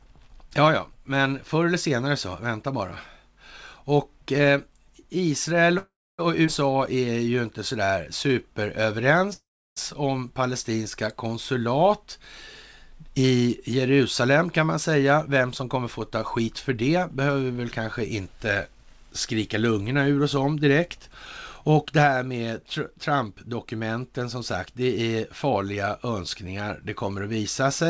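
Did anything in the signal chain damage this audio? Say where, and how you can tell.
Yes. The damage sits in the network and the call's jitter buffer, on a call path that cuts everything above 8 kHz, which fits a G.722 codec.

Two call audio freezes are the clearest sign. The first runs from 5.78 to 6.20 s and the second from 9.33 to 9.78 s, just before "om palestinska konsulat". Each time the last sound carries on as a fading buzz and then goes silent, for about 0.28 s in the first and 0.34 s in the second. Then the speech resumes where it stopped, with nothing lost. The cause is likely packets held up in transit until the buffer ran dry.

A skip ahead follows at 6.46 s. Roughly 150 ms of speech vanishes, and the two sides are joined almost seamlessly. This is a stretch of audio dropped in transit or by an overflowing buffer while newer packets were already queued, so the playout point jumped forward to cut the delay.

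A jitter buffer slow-down runs from 6.70 to 8.42 s. The speech plays at 92 percent speed with no pitch change, and sounds are drawn out. The receiver repeated single pitch periods to stretch the audio by 138 ms and rebuild its reserve.

A jitter buffer speed-up runs from 13.92 to 18.56 s, ending just before "skrika lungorna ur oss". The speech is hurried at about 107 percent speed, still at the same pitch. Short pitch-period slices were cut out, about 0.3 s in total, to drain an overfull buffer.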